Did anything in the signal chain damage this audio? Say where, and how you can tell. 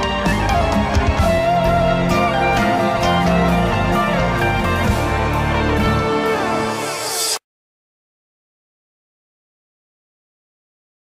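No, no stage of the chain damaged this audio.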